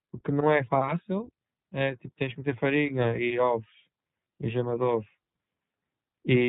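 Throughout the speech, the sound is muffled and slightly rough and synthetic, with nothing above 4 kHz: plainly audible iLBC codec damage, consistent with 20 ms narrowband frames.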